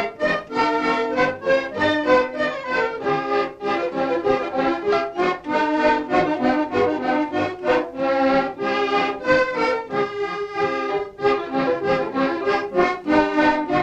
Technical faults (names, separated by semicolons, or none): dropped samples